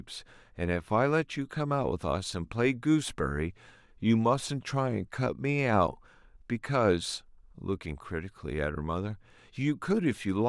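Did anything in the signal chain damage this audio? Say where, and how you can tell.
No, no damage detected.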